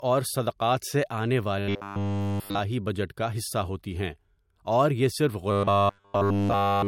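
A speech clip with two problems. Throughout, nothing reaches above 16.6 kHz, and the artefacts of a coarse encode remain. The sound points to low-bitrate audio saved at a high bitrate, likely a 64 kbit/s MP3 re-encoded at 320 kbit/s. The bigger file cannot restore what was lost. From 1.59 to 2.59 s, right after "سے آنے", and again from 5.51 s to the end, the speech becomes a rigid metallic buzz at 100 Hz. This is robotic sound from repeated short buffers. Nearly all the audio there is a repeated 10 ms chunk, which fits a 10 ms buffer.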